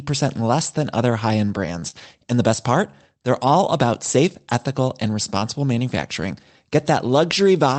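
Short concealed packet loss occurs at 1.45–1.49 s and again at 1.79–1.84 s. Each time about 20 ms of the speech never reached the decoder in time, so the receiver synthesised a continuation of the preceding sound and blended back into the real audio, leaving a brief smear or wobble.

A short stall from a late packet follows at 1.90–1.95 s. The jitter buffer ran dry, so the receiver held the last sound for roughly 28 ms until the packet arrived. Nothing was lost, but that moment is drawn out with a faint buzz.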